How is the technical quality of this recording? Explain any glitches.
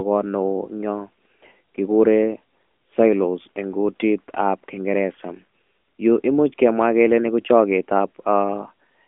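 The recording carries audible narrowband mobile-codec damage from start to finish.

AMR narrowband mobile codec, throughout: the speech is band-limited to a telephone line of roughly 250 Hz to 3.4 kHz, with nothing above 3.6 kHz. The codec resynthesises speech from a vocal-tract model and sparse pulses every 5 ms, so the voice sounds plainly buzzy and synthetic. The level of that damage fits a mid-range AMR-NB bitrate around 10.2 kbps.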